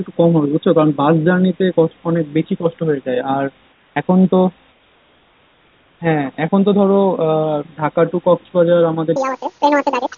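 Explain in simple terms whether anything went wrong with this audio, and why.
Comfort noise in place of the background appears twice: from 3.72 to 3.96 s and from 4.72 to 6.0 s. In these pauses the real room sound disappears and is replaced by a smooth, even hiss that is a little quieter and has none of the room's texture. The likely cause is the sending side muting itself when it detects no speech, so the receiving side fills the gap with artificial noise until sound returns.

A section at the wrong speed runs from 9.16 s to the end of the clip at about 10.18 s. Here the speech plays about 1.8 times too fast, so it sounds rushed and chipmunk-like, roughly ten semitones higher, which is nearly an octave. Speed and pitch rise together because the samples are being played out faster than they were captured, most likely because that stretch was handled on the wrong clock.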